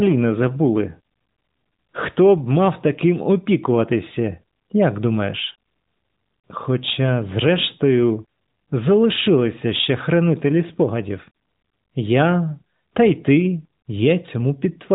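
Nothing goes wrong technically anywhere in this recording.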